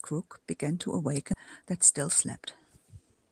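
At 1.33 to 1.35 s a skip ahead occurs: a stretch of the speech, roughly 0.7 s, was dropped while later audio was already queued, and playback jumped straight to it. Nothing fills the gap, so the two sides butt together abruptly and that part of the speech is simply missing.

From 2.83 to 3.29 s the jitter buffer, holding more audio than its target, performed a speed-up by cutting out short pitch-period pieces, about 50 ms in total. The speech runs at 109% speed with unchanged pitch, sounding slightly hurried and rushed.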